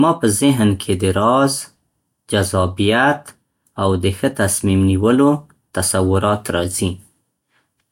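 No technical faults are audible.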